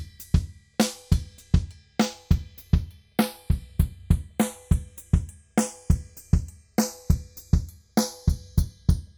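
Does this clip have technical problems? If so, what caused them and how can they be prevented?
Yes. Throughout the clip there is a slow, sweeping flange, because the two sides were combined to mono, as hollow notches glide gradually through the spectrum. This is channels drifting apart: the left and right signals were captured by devices running on separate clocks that disagree by roughly 20 ppm, so the offset between them creeps steadily, reaching around 0.2 ms by the end, and the comb filtering moves with it. Locking both devices to a single shared word clock, or recording both channels through one interface, prevents this.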